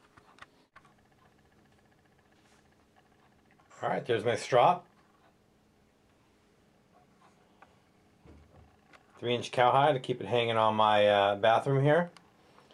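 No technical faults are audible.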